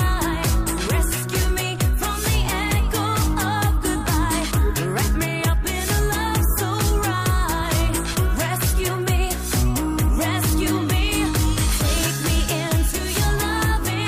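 There are no technical faults to describe in this clip.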